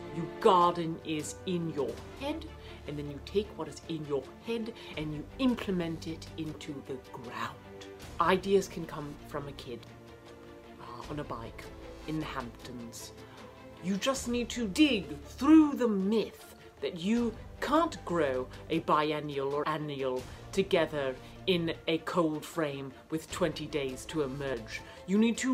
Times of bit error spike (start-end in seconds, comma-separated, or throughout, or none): none